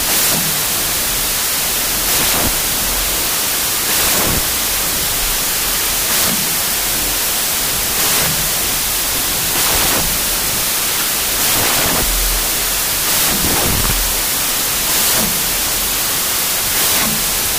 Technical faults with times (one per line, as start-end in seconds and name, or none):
0.00-17.59 wrong sample width